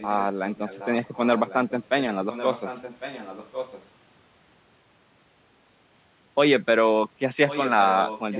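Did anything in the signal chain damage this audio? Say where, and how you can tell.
Yes, an echo leak at the call-processing stage. A faint delayed copy of the sound appears at 0.0–0.24, 0.5–0.87, 1.05–2.1 and 2.31–3.89 s, about 15 dB below the main signal, and again at 7.48–8.39 s, louder at about 10 dB down. It trails by about 1.1 s and stays within the narrowband call's 4 kHz ceiling. On a spectrogram, weaker duplicate harmonic patterns repeat 1.1 s later. The likely cause is a far-end echo canceller letting loudspeaker pickup through.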